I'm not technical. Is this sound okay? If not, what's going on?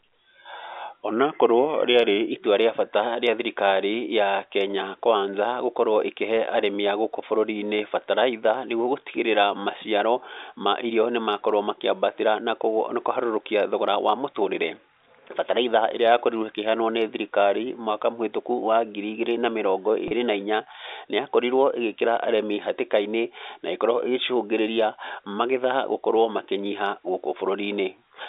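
No. From 1.11 to 2.32 s the speech briefly slows and drops about a semitone. This is likely a drift correction step, where software keeping two clocks in sync nudged the playback speed to rebalance its buffer.

At 20.08 to 20.11 s, just before "na inya", there is a tiny buzzy hold. That is packet loss with pitch repetition: about 30 ms of sound went missing, and the last bit of voice was repeated to fill the gap.

The narrow, phone-line tone comes from G.711 telephone coding, which is how ordinary phone calls sound and is not a fault.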